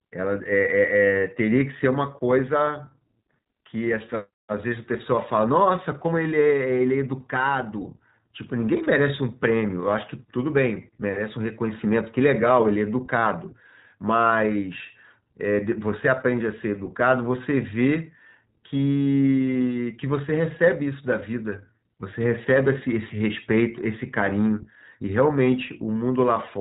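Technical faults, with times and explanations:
Throughout, iLBC codec: the speech is held to a narrowband channel with nothing above about 3.8 kHz, so sibilants and consonant detail lose their top end and the sound is muffled and telephone-like. The codec damage is plainly audible as a rough, slightly synthetic texture, because each 20 ms frame's excitation is coded on its own without leaning on the previous frame. At the bitrate this suggests, around 15.2 kbps, the fine structure between frames is not carried smoothly.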